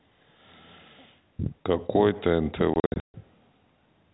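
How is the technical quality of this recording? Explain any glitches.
The speech is chopped by a burst of dropouts. From 2.74 to 3.14 s, holes of silence remove about 280 ms of a 400 ms stretch, the longest gap 140 ms. This is packet loss filled with silence: lost packets, likely 20 ms each, were replaced by nothing. The sound is band-limited below 4 kHz by its G.711 telephone coding.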